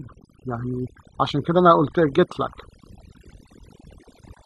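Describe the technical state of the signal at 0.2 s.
At 0.2 s the signal shows overdone noise removal, and it is present across the whole clip rather than at this moment alone. A noise reduction stage set too aggressively is cutting individual frequency bands down or out wherever they sit close to its noise estimate, taking the quieter parts of the speech with them. The background drops and breaks up into twinkling specks.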